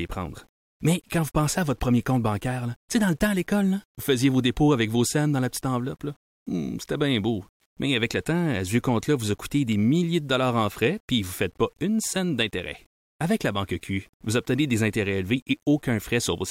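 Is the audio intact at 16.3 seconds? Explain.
No. At 16.3 seconds the speech carries the same grainy distortion heard from start to finish, the sound of low bit depth without dither. The likely cause is rounding to very few levels, which fits 9-bit samples, so the error tracks the signal and sits roughly 40 dB below it, turning quiet tails gritty. A waveform zoomed in shows visible stair-steps; a spectrogram shows broadband grit that rises and falls with the speech instead of a steady noise floor.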